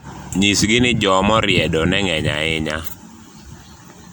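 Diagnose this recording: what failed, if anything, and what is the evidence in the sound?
Throughout the speech there is a swirly, hollow smear and blurred consonant attacks, worse than a single MP3 encode at a rate that fits roughly 112 kbit/s would leave, with nothing above 20.1 kHz. This is likely codec-stage generation loss: about five MP3 passes, each requantising on a shifted frame grid.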